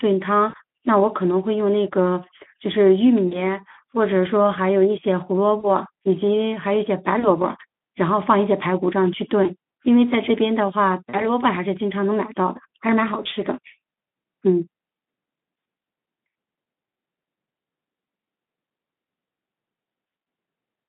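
At 0.49–0.55, 3.27–3.41, 5.59–5.70, 7.19–7.28, 9.43–9.50, 11.10–11.28 and 13.23–13.27 s, VoIP packet loss concealed by the speech codec breaks the speech. The gaps are about 20 to 40 ms, which fits one or two lost frames. The Speex decoder, on its narrow line band, stretches the last sound into a fading buzzy tone or coloured noise. It stays weak and smeared briefly after the audio resumes.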